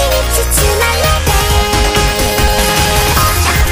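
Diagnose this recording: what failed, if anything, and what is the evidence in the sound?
The failure is at the driver or buffer stage: periodic USB or driver dropouts. From 2.21 s to 3.66 s the sound is broken by evenly spaced ticks, one every 54 ms, around thirty in all. Each gap removes roughly 10 ms of audio. The missing audio is skipped rather than filled, so the waveform jumps and clicks at each join. The steady spacing points to a background task stalling the USB transfer or audio driver on a fixed schedule.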